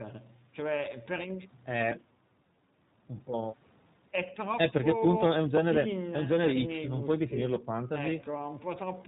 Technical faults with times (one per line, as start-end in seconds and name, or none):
0.00-9.07 iLBC codec